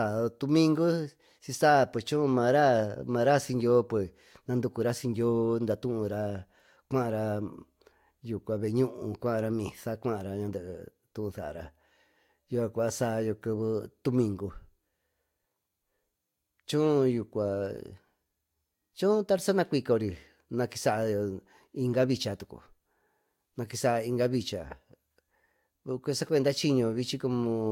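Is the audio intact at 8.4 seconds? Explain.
Yes, the speech at 8.4 s is intact, with no dropout, click, distortion or other fault audible at that moment.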